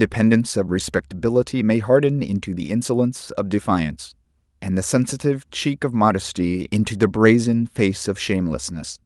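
Speech recording with no audible technical faults.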